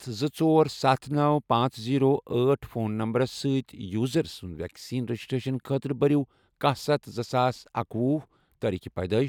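Nothing in this speech recording stands out as a technical fault at any point.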